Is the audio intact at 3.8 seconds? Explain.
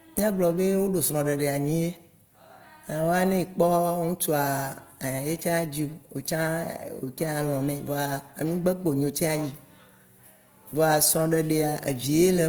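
No. At 3.8 seconds, as throughout the speech, plainly audible Opus compression is present. The encoder likely held every band's energy but ran short of bits, filling bands with folded or noise-like content, so tones sound rough and grainy, which fits about 24 kbps in CELT mode.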